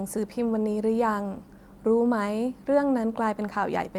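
No technical faults are audible anywhere in this speech recording.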